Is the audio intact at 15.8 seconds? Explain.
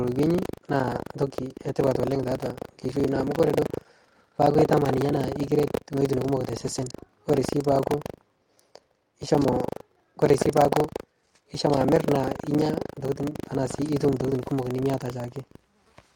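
No. At 15.8 seconds the speech carries three overlapping faults.

Buffer tearing runs through the whole clip, so it is present here. The writing program and the playback hardware have slipped out of step and cross inside every buffer. A small slice of each buffer holds audio from roughly 150 ms earlier, with hard joins on both sides. The joins recur at 25 Hz, which fits a buffer period of 40 ms. The result is a steady robotic rattle that rides on the speech.

Clock drift between sender and receiver also spans the entire clip. The sender's clock runs fast, by a few percent. Audio arrives quicker than the receiver plays it, so its jitter buffer keeps filling. The receiver cannot simply absorb the excess. It must keep trimming material to avoid overflowing. That gives small timing hiccups throughout, at uneven intervals, and 15.8 s sits inside that pattern.

Repeated timing corrections run from 0.17 to 15.94 s, so 15.8 s falls near the end of that stretch. 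These are the receiver's trims, cutting short pieces to keep pace with a sender at 104% speed. Every edit goes the same way, removing audio, but the spacing is uneven. Each cut is tiny. Where audible, it comes across as a slight skip or a faintly unsteady tempo in the speech.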